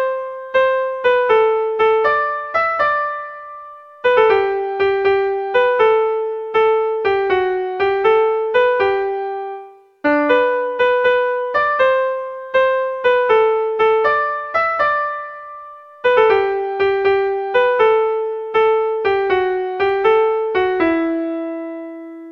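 Near the end, between 19.74 and 20.05 s, the audio picks up three short CD scratch ticks, each well under a millisecond. That's a scratch or blemish wiping out more data than error correction can restore on successive turns of the disc, so the player patches or mutes those few samples and you hear a quick regular ticking.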